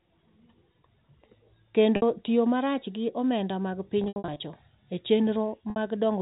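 At 1.96 s there's a brief packet loss with pitch repetition: about 60 ms of audio dropped, which fits three 20 ms packets. The receiver loops the last pitch period to fill the hole, so you get a short held, buzzy tone. A rougher patch runs from 4.04 to 4.40 s, with 220 ms lost in scattered bursts, the longest 80 ms, so the repeated cycle fades out before the audio cross-fades back. At 5.70 s there's another 60 ms blip, heard through the narrowband G.711 telephone band.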